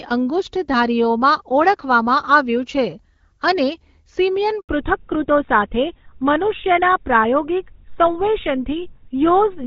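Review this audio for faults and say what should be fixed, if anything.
A handover gap runs from 4.61 to 4.69 s, an 80 ms silence in the middle of the speech. When the call is passed from one network link to another, no speech frames reach the decoder until the new link is up, so the sound fades out within a few tens of milliseconds and stays dead for the rest of the switch. Whatever was said in that window is gone. Preventing it means tuning the network for make-before-break handover so the new link is carrying frames before the old one drops.

A fallback to narrowband starts at 4.69 s, straight after the gap, and lasts to the end of the clip. Before the handover the speech carries the fuller band of HD Voice, which fits AMR-WB at about 12.65 kbit/s with only light coding roughness. After it, nothing remains above 4 kHz, and the voice turns duller and grittier, which fits a switch to GSM full-rate coding at about 13 kbit/s. 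To prevent it, the target network should be configured to support the wideband codec so the call keeps HD Voice across the handover.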